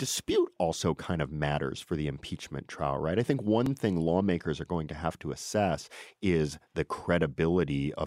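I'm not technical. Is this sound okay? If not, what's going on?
No, there's one glitch. At 3.66 s, between "trial right I think" and "thing lawmakers are going", you'll hear a tiny click. That's a repeated buffer: fresh audio arrived late, so the player replayed a sliver of roughly 3 ms once, likely a 128-sample chunk.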